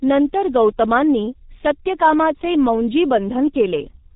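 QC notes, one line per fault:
Throughout: G.723.1 codec damage, heavy. The speech is muffled, with nothing above 4 kHz, so consonants lose their crisp edges and blur together. The codec rebuilds the voice from a simple model refreshed only every 30 ms. Fast changes between sounds get smeared, and the voicing comes out hoarse. The sparse, coarse detail fits a very low bitrate of about 6 kbit/s.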